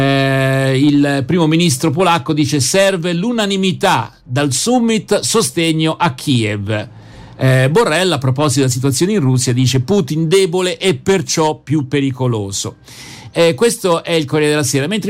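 Nothing here sounds wrong to the ear; the audio runs along with no dropouts, glitches or other technical faults to point out.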